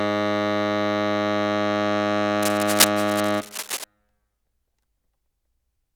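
From 2.42 to 3.84 s, cable scratch noise rides over the music: dense, uneven bursts of scratching, nearly as loud as the music itself. The likely cause is a worn connector being moved. Unlike steady hiss, it comes in irregular, rustling bursts, then stops.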